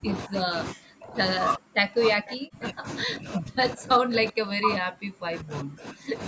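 A speech clip with speech suppressed in double talk. The voice drops out or sinks sharply from 0.0 to 0.09 s, 0.25 to 0.55 s, 0.71 to 1.18 s, and from 1.56 to 6.19 s. The deepest dips fall around 40 dB, with the second one nearer 30 dB. The likely cause is an echo canceller that could not tell this talker from the far end's echo. It attenuated both. The call's microphone processing leaves nothing above 8 kHz.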